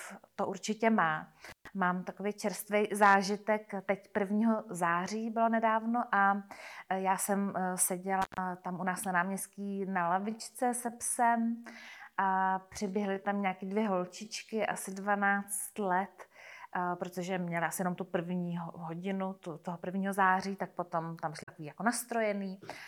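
At 1.49 s and again at 8.22 s, an intermittent contact briefly opens. Each time the sound drops out for about 130 ms, with crackle at both edges. From 9.55 s to 15.83 s the pace slows to about 0.73 times normal while pitch holds steady, likely a time-stretched section. At 21.39 s, damaged data in a compressed stream makes the decoder lose sync. A short glitch lasting about 0.1 s results.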